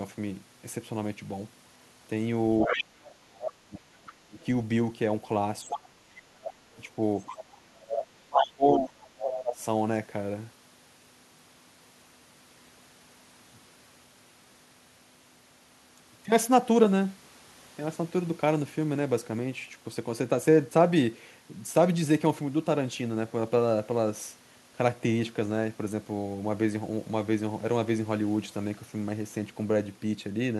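A speech clip with two kinds of echo-canceller trouble in its first ten seconds. The other side's voice leaking through appears at 2.6 to 2.83 s, 3.46 to 3.52 s, 4.07 to 4.45 s, 5.67 to 7.44 s and 8.02 to 9.35 s. It sits from about 5 dB to about 20 dB below the talker, loudest in the first and last stretches. The likely cause is a loudspeaker feeding the far voice back into the microphone, with the canceller leaving part of it in. Speech suppressed in double talk occurs at 2.66 to 4.39 s and 7.73 to 9.61 s. In each span, roughly one and a half seconds of the talker is pulled down, by as much as about 30 dB in the first and about 25 dB in the second. Both spans overlap the leaked voice. The likely cause is the canceller failing to tell the two sides apart while both talk, and turning everything down.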